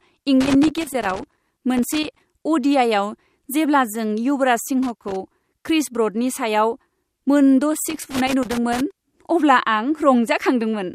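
Speech, with loose connector crackle at 0.41–2.20 s, 4.83–5.16 s just after "जेब्ला जों युवराज", and 7.90–8.93 s: a worn contact intermittently breaking the signal, heard as irregular scratchy bursts. DAB burbling appears at 10.11–10.18 s, a brief patch of burbling where residual bit errors, roughly a tenth of a percent, corrupt the sub-band audio data across what sounds like about three frames.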